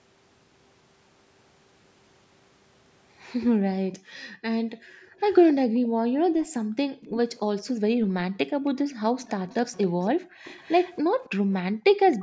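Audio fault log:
3.98–7.1 s, 8.06–8.64 s, 10.13–10.39 s and 11.73–11.84 s, background gated by the echo canceller: the room tone keeps ducking out, by about 40 dB (about 28 dB in the last one), for about a second and a half across the first stretch. The canceller slams the mic down while the far end plays, then lets go.
5.19–5.54 s, 7.02–7.39 s, 9.2–11.3 s and 12.11–12.17 s, echo leak: a faint copy of the talker trails 275 ms behind, roughly 15 to 25 dB under the main speech and loudest around 7 s. It's likely loudspeaker sound the canceller didn't fully remove, getting sent back down the line.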